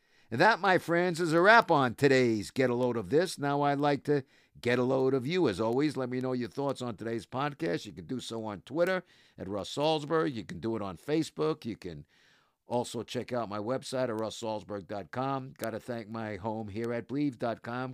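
From about 0.17 s right through to 17.81 s, there's a steady stream of word clock ticks under the speech, roughly one every fifth of a second, so around seventy in all. That's the classic sign of a digital link read by a device on its own clock rather than locked to the sender. The two clocks drift apart by something like 100 ppm, and each time they slip, a single sample gets dropped or repeated, leaving a sharp tick.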